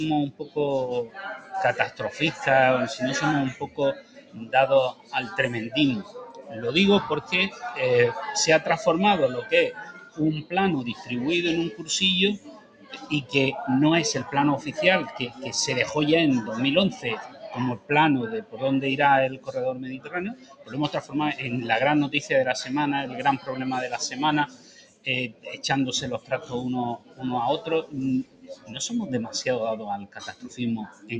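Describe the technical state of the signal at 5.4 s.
At 5.4 s the signal sits inside a stretch of sound cut by the noise suppressor, running from 3.53 to 7.63 s. The suppressor mistakes the held parts for noise and pulls them down, by about 14 dB at the deepest. Attacks come through while sustains and decays sink, which separates this from a dropout or a fader dip. This sits within a noise suppressor applied to music or sounds across the whole clip, whose gain swings by roughly 15 dB. Tails and ambience pump and flutter against the sharper onsets.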